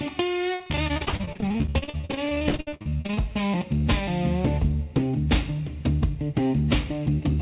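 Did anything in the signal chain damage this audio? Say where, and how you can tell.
Yes, network: repeated packet loss (robotic sound) from 0.54 to 3.19 s, with dozens of short holes up to 62 ms patched by repeating prior sound, unlike one isolated dropout.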